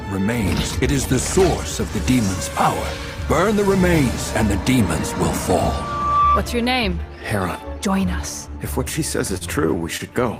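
At 9.37–9.44 s and again at 9.97–10.03 s, a late packet emptied the jitter buffer, causing a short stall. The last sound is held about 34 ms, then 23 ms, with a faint buzz or dip before playback resumes seamlessly.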